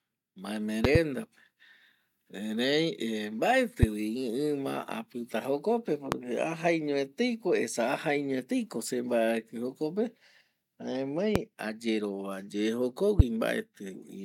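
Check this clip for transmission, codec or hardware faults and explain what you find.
Five loud pop events sit on top of the speech, which continues underneath each one without a break. The first, at 0.85 to 0.98 s, is a quick double pop. Single pops follow at 3.83 to 3.85 s, 6.12 to 6.15 s, 11.36 to 11.38 s and 13.20 to 13.22 s. Each peaks roughly 20 dB above the speech, and the one at 6.12 s is closer to 25 dB. The likely cause is a sudden voltage step or spike, from a connector, switch, static discharge or driver glitch, that the downstream circuitry shaped into a short, sharp thump.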